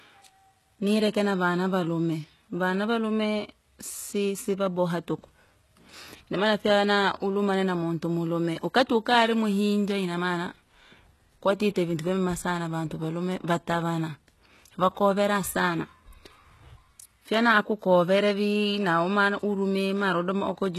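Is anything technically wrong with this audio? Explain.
Yes. Throughout the speech there is plainly audible HE-AAC compression damage, with nothing above 12.3 kHz. The s sounds come out gritty and metallic, and the upper treble sounds bright but synthetic, which points to a very low bitrate in the region of 16 kbps. The likely cause is spectral band replication: the codec codes only the lower band and fills the treble with copied, coarsely shaped lower content, so the harmonics above the crossover don't line up with those below. On a spectrogram the treble shows repeated, blocky texture that mirrors lower bands, with a clean cutoff at 12.3 kHz.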